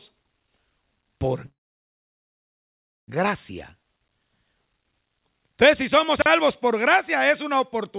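Speech over a call path, band-limited to nothing above 4 kHz, which fits G.711 mu-law at 64 kbps. From 1.46 to 3.10 s there is a call audio freeze: the last sound trails off into about 1.5 s of silence, then the speech resumes where it stopped with nothing lost, the whole pause pushing later audio about 1.6 s behind. Likely cause: packets held up in transit until the jitter buffer ran dry. Between 6.18 and 6.26 s a 40 ms chunk of audio is out of order, playing one chunk late after the audio meant to follow it. The three hard joins give a brief jumbled moment, though no audio is missing.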